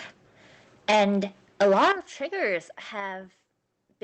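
At 0.91 s, the speech drops by about 4 dB in a single step. This is a microphone volume stepped down, likely the call software cutting the device's input gain at once, so voice and background fall together without a fade.

From 1.61 to 1.92 s, the microphone input was likely set too high, about 11 dB over the converter's limit. This is microphone overload. Roughly a fifth of the samples have their tops clipped flat, giving the loudest syllables a harsh, crackling edge.

At 1.92 s, just before "of triggers", the level falls again, this time by about 10 dB. It is another microphone volume stepped down, likely the software reacting to that distorted burst by sharply lowering the input volume.

At 3.0 s, just after "of triggers", a third step down of about 4 dB follows, likely the same gain control pulling the input lower again, and the sound drops abruptly once more. Through all of this the call path's codec limits the top end to about 8 kHz.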